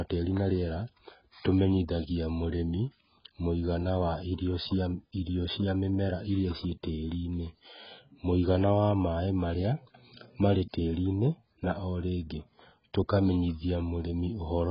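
Speech that has likely passed through heavy AAC compression, with the encoder starved at a very low bitrate, which fits roughly 12 kbps AAC-LC. Nothing survives above 5.2 kHz, so the sound is dull throughout, and sibilants and sustained sounds turn smeared, warbling and fizzy.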